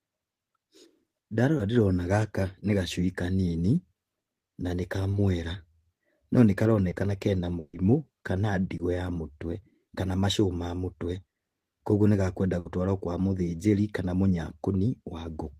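Four spots of short concealed packet loss crop up in this speech, at 1.57, 5.11, 6.89 and 8.77 s. Each time about 20 ms of audio didn't reach the decoder in time, so the receiver papered over it by carrying the previous sound forward for that stretch and then easing back into the real signal. You hear it as a quick smear or wobble, and a brief consonant caught in the hole can simply disappear.

Two bursts of packet loss are heavier. The first runs from 7.59 to 7.75 s: about 140 ms went missing, and the concealment stretched the last sound across the gap, fading it as it went, with about 10 ms of outright silence before the audio picks up again further along. The second, at 12.59 to 12.67 s, is shorter at about 60 ms. Both come across as a held buzz or decaying hiss with a chunk of speech skipped.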